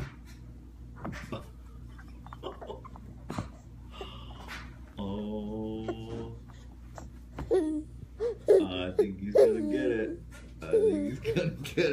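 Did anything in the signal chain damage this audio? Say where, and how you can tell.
Yes. At 1.40 s there is a tiny skip where the waveform jumps forward and roughly 19 ms of sound goes missing. This is an overlap between stream segments at the playback stage: the player trimmed a timestamp overlap that was never actually duplicated. Unlike a packet-loss dropout, there is no silent or concealed gap, only an abrupt splice.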